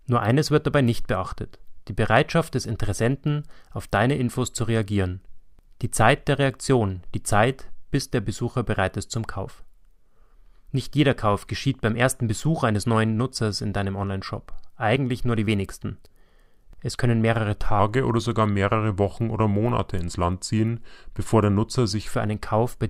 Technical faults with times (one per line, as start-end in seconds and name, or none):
2.97 overlap between stream segments
16.94 overlap between stream segments
17.79-22.11 section at the wrong speed